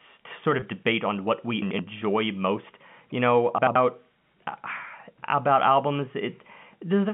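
At 0.60 to 0.62 s, about 20 ms of the stream went missing, which fits a single lost packet. The receiver covered the gap with packet loss concealment by pitch repetition, replaying the last pitch period. The loss is short, so the repetition never fades to silence. It is heard as a brief held, slightly buzzy smear before the sound carries on, inside the narrow telephone band of the G.711 line.

At 1.62 to 1.79 s and again at 3.58 to 3.76 s, chunks play out of order. Each time an audio chunk of about 85 ms was delivered or written one chunk late, so it plays after the chunk that should follow it. No audio is lost, but the sequence is wrong for about 170 ms, with hard joins at the swapped boundaries. Each spot sounds like a jumbled moment.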